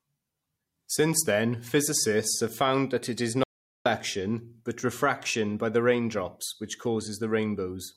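Right after "found that it is", at 3.44 s, there's an audio dropout to silence lasting about 0.42 s, until 3.86 s. The speech cuts off mid-flow into dead silence, no room tone at all, most likely because the input was briefly lost while recording carried on.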